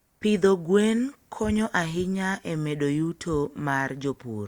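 A short piece of speech with nothing technically wrong with it.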